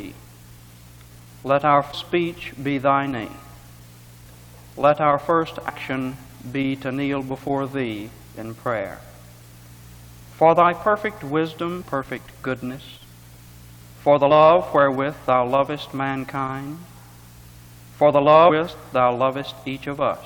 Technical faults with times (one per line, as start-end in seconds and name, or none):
1.93 damaged data in a compressed stream
5.68-5.70 damaged data in a compressed stream
18.48 damaged data in a compressed stream